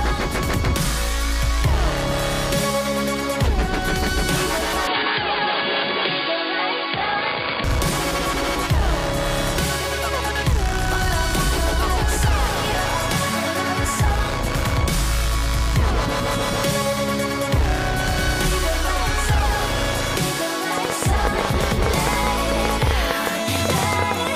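The audio carries two separate faults. From 4.87 to 7.64 s the sound turns dull and boxy. Nothing above 4.8 kHz gets through, and a faint new noise floor appears well below the signal. The level stays about the same, and there is no gap at either switch. This points to an input switched to a poorer device, likely a narrower-band microphone or headset profile taking over for a few seconds. From 20.78 to 24.28 s a train of clicks sits over the sound. About forty sharp pops arrive at roughly 10.9 per second, spaced unevenly. They peak well above the surrounding sound. Their similar shape suggests one repeating source, likely electrical interference or a faulty connection or power supply.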